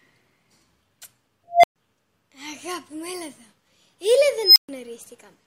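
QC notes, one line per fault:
1.51–1.76 s, unstable filter: a tone around 700 Hz swells over about 130 ms until it clips, then the runaway recursion overflows and the output drops to about 120 ms of silence. The waveform shows an exponential envelope that clips, then a flat gap. On a spectrogram there is a brightening horizontal line ending in a blank column.
4.43–4.69 s, unstable filter: the same runaway, this time as a squeal around 5 kHz. It builds over about 130 ms into clipping, then cuts out for about 130 ms while the filter resets. The spectrogram shows a rising high band followed by a dark gap, and the waveform a swelling, flat-topped burst before it falls flat.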